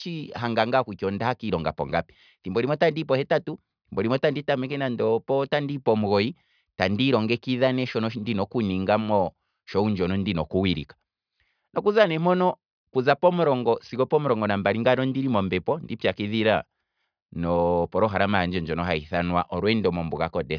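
No technical faults are audible anywhere in the speech.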